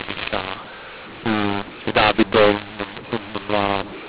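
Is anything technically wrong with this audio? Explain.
Yes. The speech has a mu-law and A-law mix-up running through the whole clip. The telephone audio was coded with mu-law but decoded as A-law. The two laws map their 8-bit codes to levels differently, so each sample is reconstructed at the wrong size. Some come out too loud, others too quiet. The quietest samples are pushed well above silence. The speech sounds harsh and gritty, and the pauses fill with hiss. The narrow band, with nothing above 4 kHz, fits ordinary G.711 telephone coding.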